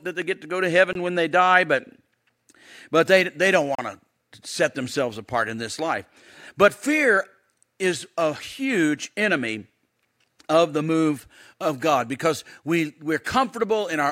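The program likely twice failed to fill its output buffer in time, leaving a block of digital silence. At 0.93 to 0.95 s, after "get to go to", a 23 ms gap fits a 1024-sample buffer. At 3.75 to 3.79 s, after "but they they don't", comes a 34 ms hole.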